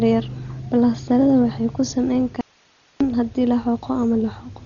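The speech sounds dull and muffled throughout, with nothing above about 6.9 kHz and a rough, fluttering noise around voiced sounds. This is likely heavy Dolby Digital compression, consistent with a bitrate near 32 kbps: the encoder narrows the band and the decoder fills starved frequency lines with noise.

From 2.41 s to 3.01 s, just after "balastarrada waxay ku samayn", the speech cuts out abruptly for about 0.6 s, leaving only hiss some 35 dB below the signal, before returning at "haddii la". This audio dropout to a faint residue likely comes from the signal being lost while the path after the break stayed live.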